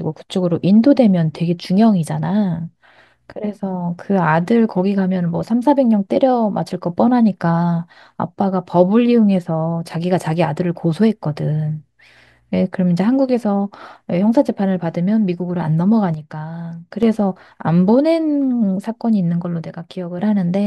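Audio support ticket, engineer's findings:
Speech and background drop abruptly together by about 7 dB at 16.14–17.03 s and about 6 dB at 19.66–20.19 s: sudden gain jump, likely an unramped digital gain change.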